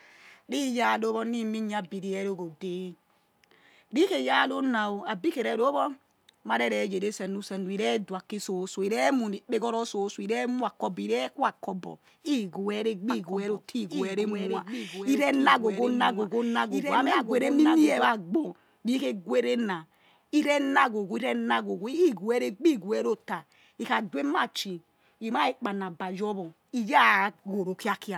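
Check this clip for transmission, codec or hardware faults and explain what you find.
One fault stands out, a doubled audio track from 13.10 to 18.04 s. A second, somewhat quieter copy of the speech trails about a second and a half behind, likely from a slower capture path. Unlike a room echo, it carries no decay and cuts in and out abruptly.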